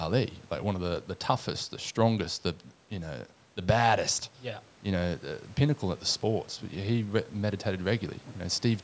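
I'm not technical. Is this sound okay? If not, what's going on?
Yes, this speech recording has no problems.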